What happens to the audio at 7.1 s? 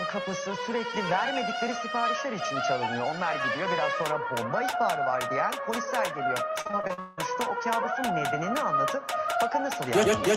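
At 7.1 s the audio is near the end of a burst of repeated packet loss (robotic sound) running from about 6.61 to 7.19 s. Seven gaps fall in just over half a second, each patched by stretching the preceding sound, so about 59% of that stretch is concealment, with the longest hole near 178 ms. The result is choppy, with pieces missing. Unlike a single dropout, the holes recur in quick succession, giving a choppy texture rather than one clean break.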